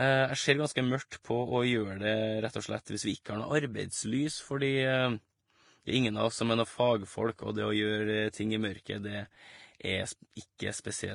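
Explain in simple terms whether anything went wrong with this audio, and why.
Transcoding between lossy codecs, heard throughout the speech, is the likely cause of the problem. The audio seems to have been squeezed by one data-saving format and then squeezed again by another. The second pass treats the first pass's damage as real sound, so the flaws from both passes pile up and are heard together.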